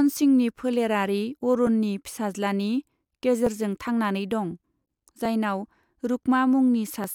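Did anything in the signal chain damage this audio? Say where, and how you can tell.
Yes. Just after "सिंहनि फोलेरारि", a short click appears at 1.67 s. Clicks recur at a steady 1.79 s spacing, about four in all, up to about 7.04 s. The regular spacing points to the buffer between two devices. This is likely clock drift buffer slips. The two clocks disagree by several hundred parts per million, so the buffer slowly fills or drains. Each time it overflows or runs dry, a few dozen samples are dropped or repeated, and the waveform jumps into a click.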